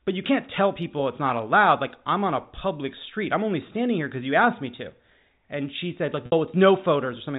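At 6.26 s, just after "she said like", a packet loss with pitch repetition lasts about 60 ms, to 6.32 s, a gap that fits three 20 ms packets going missing. The receiver fills it by looping the last pitch period and fading it down, so the sound briefly holds on a buzzy, static tone. On a waveform, identical repeating cycles shrink in amplitude. A spectrogram shows flat, unchanging harmonic lines before normal speech resumes, all within the 4 kHz band of the G.711 telephone coding.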